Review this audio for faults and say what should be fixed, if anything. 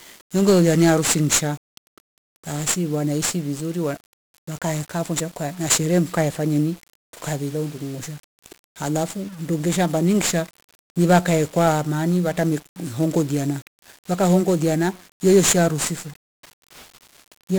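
Throughout the speech, heavy 1-bit DFPWM compression fills it with fuzzy, crackly broadband noise and hiss over the treble. Each sample is just one up-or-down step of an adaptive level, which fits a 48 kbps stream. Unlike MP3-style artefacts, there's no swirly warbling, only grainy noise riding on the speech. Prevent it by encoding with a multi-bit codec such as Opus or AAC.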